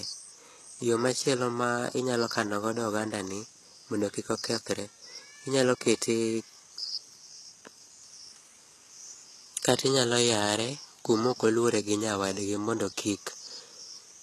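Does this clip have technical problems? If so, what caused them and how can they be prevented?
Yes. The speech is audibly damaged throughout by what is likely HE-AAC compression: replicated treble sounds gritty and lispy on s sounds, nothing above 12.3 kHz, consistent with roughly 16 kbps. Encoding at a higher bitrate, or with plain AAC, prevents this.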